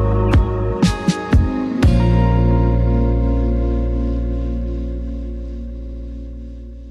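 From 5.78 to 6.06 s there are repeated frames: a block of about 70 ms, consistent with three compressed frames, plays four extra times. It sounds like a rapid stutter, and the duplicated data stretches the audio by about 279 ms.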